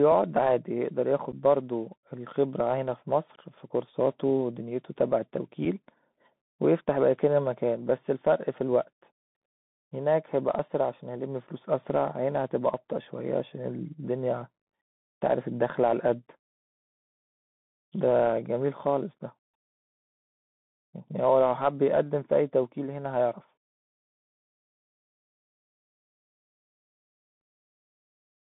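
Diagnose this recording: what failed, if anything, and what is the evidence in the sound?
The codec stage is the culprit here: it's a Bluetooth CVSD headset codec. The band runs from about 150 Hz to 3.6 kHz, sibilants come out scratchy, and there's a grainy hiss underneath. That's the one-bit up/down coder, which fits a 64 kbps link, losing track of fast, loud highs.

On top of that there's unconcealed Bluetooth headset packet loss on the radio link. There's an abrupt hole of about 11 ms at 1.32 s, likely a few packets, and a single-packet gap of about 4 ms at 5.65 s. Nothing fills the gaps.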